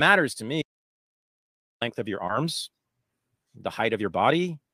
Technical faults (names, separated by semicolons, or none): audio dropout to silence; short concealed packet loss